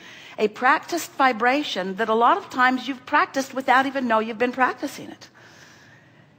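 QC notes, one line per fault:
No faults heard.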